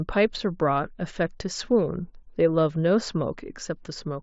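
No technical faults are audible anywhere in the speech.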